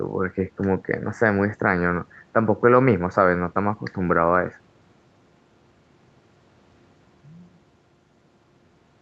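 No technical faults can be heard in the speech, which carries nothing above about 8 kHz, as expected from call microphone processing followed by a WebRTC call path whose codec limits the band to 8 kHz.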